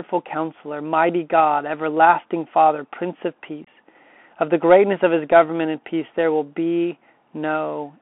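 From start to finish the speech sounds boxed-in and gritty: the lows are thin below about 250 Hz, nothing survives above 3.4 kHz, s sounds come out scratchy, louder high-pitched moments break up, and a fine granular hiss sits under everything. This is the Bluetooth CVSD headset codec, whose single up-or-down bit per sample, consistent with a 64 kbps stream, lets an adapting step size trail fast, bright sounds.

Between 3.65 and 3.68 s the speech drops out in a short, hard-edged gap of about 22.5 ms, as though a brief piece were snipped away. This is unconcealed Bluetooth headset packet loss. A handful of the headset's few-millisecond voice packets never arrived, and silence or an idle pattern filled the space instead of any attempt to bridge it.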